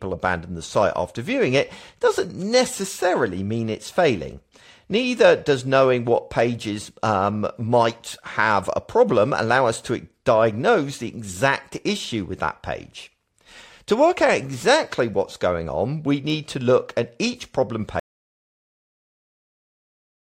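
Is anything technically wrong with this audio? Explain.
Yes. At about 18.0 s, right after "look at each problem", the speech suffers an audio dropout to silence that runs to the end of the clip. The input signal was likely lost, perhaps through a disconnected device, a broken link or an accidental mute, while recording carried on writing silence. The speech stops abruptly mid-flow, and what follows is total silence with no room tone, so anything spoken in those last two seconds or so is gone.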